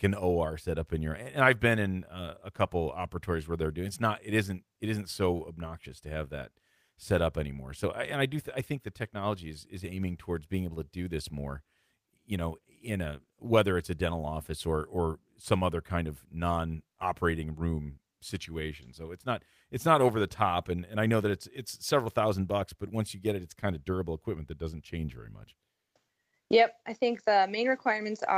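No technical faults can be heard anywhere in the recording.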